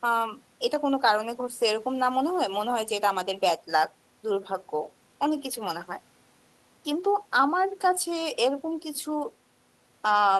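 Nothing in this speech recording sounds technically faulty.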